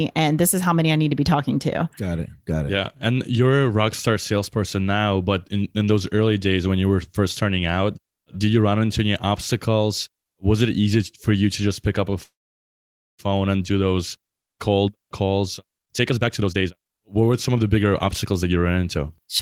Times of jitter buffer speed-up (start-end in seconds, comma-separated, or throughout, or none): 15.82-19.00